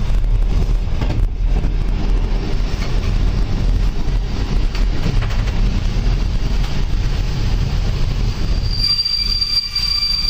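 At 0.51, 1.66 and 5.84 s, compressed frames get skipped: the audio jumps ahead about 150, 100 and 100 ms, fitting roughly 26 ms frames.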